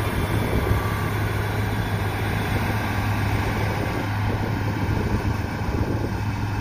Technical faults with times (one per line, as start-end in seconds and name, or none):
0.00-6.60 doubled audio track